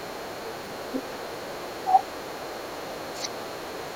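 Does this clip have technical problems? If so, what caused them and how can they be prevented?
Yes. Other side's voice leaking through runs from 0.0 to 1.86 s, from 2.07 to 3.05 s and from 3.31 s to the end, a faint second voice sitting roughly 25 dB under the speech, and fainter still, around 30 dB down, in the last stretch. The likely cause is the talker's loudspeaker feeding the far end back into the microphone, with the echo canceller leaving a residue. A headset, or a better-tuned canceller with a lower speaker volume, would prevent it.

Speech suppressed in double talk occurs from 3.08 to 3.31 s, where the talker's level drops sharply, by as much as about 25 dB, for roughly a fifth of a second. With both sides talking at once, the echo canceller likely could not tell its own talker from the loudspeaker echo and pulled the whole signal down. A headset removes the echo path entirely, or a canceller with stronger double-talk detection would keep the near voice through overlaps.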